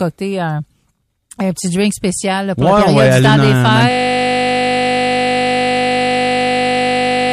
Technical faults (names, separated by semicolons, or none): system hang loop